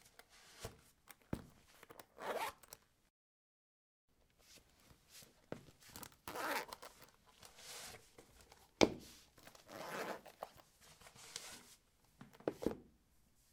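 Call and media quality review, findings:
No faults heard in the everyday-sound recording; nothing to attribute to capture, transport or playback components.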